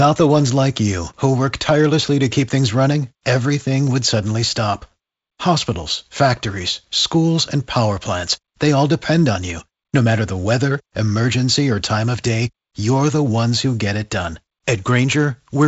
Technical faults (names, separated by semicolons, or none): none